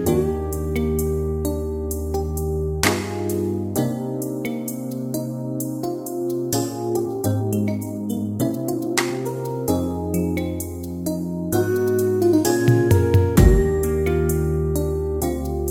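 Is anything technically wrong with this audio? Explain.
Yes. From 6.87 to 9.33 s there is a time-stretched section: the audio runs about 1.6 times faster at unchanged pitch, sounding rushed, likely from software dropping short pieces to shorten it.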